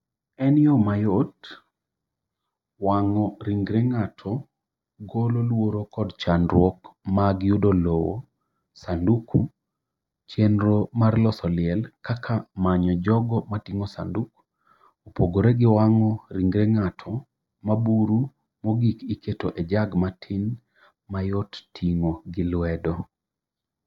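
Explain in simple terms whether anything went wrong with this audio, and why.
Yes, the speech has channel delay (comb filtering) throughout. One channel arrives a fraction of a millisecond late, and mixing them cancels tones in a repeating pattern starting near 3 kHz. Unlike simple muffling, this leaves an evenly spaced, hollow, phasey colour.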